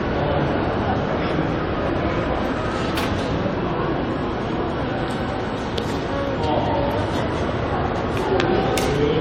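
Throughout, the audio was likely re-encoded about five times through an AAC-LC chain near 96 kbit/s, causing generation loss: swirly, hollow smearing, blurred attacks, and nothing above 18.9 kHz.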